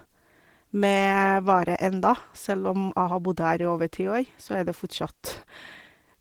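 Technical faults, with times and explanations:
Throughout: Opus voice compression. The speech has the hoarse, faintly robotic grain of coarsely coded excitation, with a layer above 8 kHz carrying the top end. The damage is plainly audible, which fits a low bitrate around 16 kbps.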